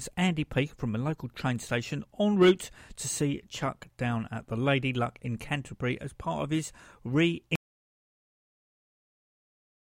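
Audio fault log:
7.56 s to end, audio dropout to silence: the speech cuts off mid-flow and pure silence follows, with no room tone. A lost input is the likely cause.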